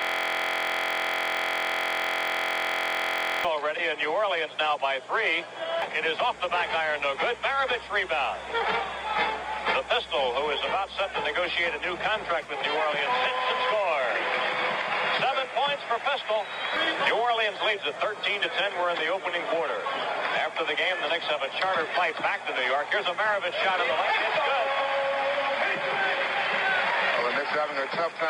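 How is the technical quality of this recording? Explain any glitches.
The recording opens with a fault: a system hang loop that is already under way when the audio begins and lasts until about 3.45 s. The system stalled while the playback hardware kept replaying the same 23.22 ms stretch of its ring buffer, roughly 147 times, which fits a 1024-sample buffer. Because the loop is so short, it repeats at 43.1 Hz and is heard as a steady, rough buzz at that rate rather than as a stutter.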